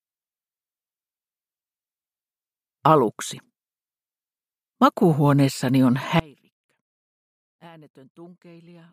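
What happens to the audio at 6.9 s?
At 6.9 s the audio is in a dropout to a faint residue, running from 6.20 s to the end, likely a lost feed on a still-live path. The waveform abruptly shrinks to a thin sliver, roughly 30 dB down.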